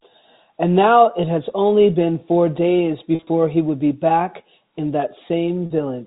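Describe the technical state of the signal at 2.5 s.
At 2.5 s the speech is intact, carried over ordinary G.711 telephone coding with nothing above 4 kHz and no fault at that moment.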